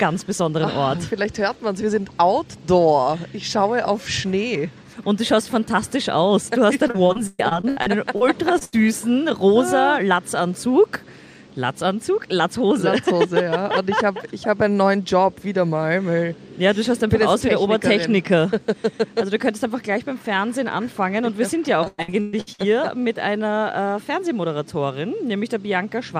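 From 6.87 to 8.23 s the connection kept dropping or delaying packets, a case of repeated packet loss (robotic sound). There are ten separate gaps, the longest 118 ms, and the receiver had to invent about 400 ms in total, close to a third of that stretch. It did this by stretching out the last sound it had received each time. The result is choppy and machine-like, with fragments missing.

At 8.59 s a single 20 ms piece failed to arrive in time, a short concealed packet loss. The decoder bridged it by extending what came just before and then blending back into the real signal. It comes across as a tiny smear or wobble.

Right after, from 8.65 to 8.75 s, a burst of packet loss took out about 80 ms in one run. The receiver again carried the previous sound forward, turning it down as the gap went on, so a brief held buzz or fading hiss takes the place of the lost audio before playback picks up beyond it.

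Repeated packet loss (robotic sound) returns from 21.85 to 22.61 s, more severely this time. Across six gaps, the longest 116 ms, roughly 410 ms was filled in, more than half of the span. The audio there is heavily broken up and robotic, with much of the original content replaced by repeated, artificial-sounding continuation.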